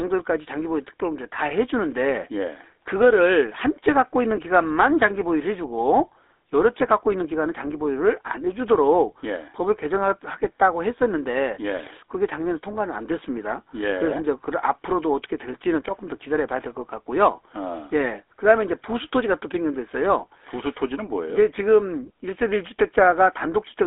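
Throughout, the speech has the buzzy, gravelly roughness of the GSM full-rate codec, whose sparse pulse excitation fits a 13 kbps stream. The band runs from about 300 Hz to 3.6 kHz, and a spectrogram shows a hard ceiling, empty above 3.8 kHz.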